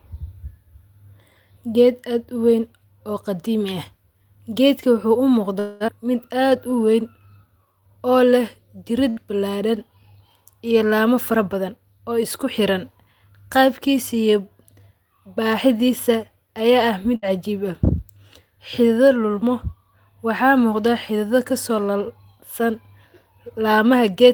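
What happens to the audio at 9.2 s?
A burst of packet loss runs from 9.10 to 9.20 s. Several packets in a row arrived too late or not at all, so the receiver stretched the last received speech over about 66 ms as a held, fading sound. Playback then jumps ahead, skipping about 60 ms.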